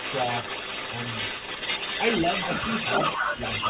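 Speech, and there's an echo leak running the whole way through, from 0.0 to 3.69 s. A second copy of the talker trails the original by about 423 ms and sits at roughly the same loudness as the direct sound, so it muddies everything rather than lurking in the background. The likely cause is a far end playing the call over a loudspeaker, with its echo canceller failing to strip what the mic picked back up and sending that copy down the line. Near the end, from 3.21 to 3.39 s, there's also what sounds like speech suppressed in double talk: the level drops sharply, around 15 dB at its deepest, for roughly a fifth of a second. That's likely the canceller getting confused when both sides were talking at once and ducking everything. Everything is band-limited with nothing above 4 kHz, which fits a narrowband G.711 mu-law call path.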